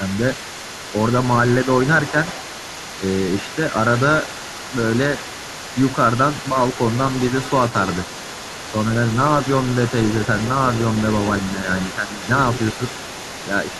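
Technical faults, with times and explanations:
throughout: other side's voice leaking through. A second voice sits under the talker for the whole clip, around 15 dB quieter, which likely means the far end is playing from a loudspeaker near the microphone and the echo canceller is leaving part of it behind. It adds a voice rather than taking anything away; the talker's own level is untouched, which separates it from suppression during double talk.
11.96–12.27 s and 12.78–12.93 s: speech suppressed in double talk. The talker's voice dips by a few decibels, first for about a third of a second, then for a much briefer moment. This is likely the echo canceller meeting both sides talking at once and turning everything down because it could not tell the talker from the echo. The talker's own voice briefly loses level, rather than a second voice being added as with the leakage.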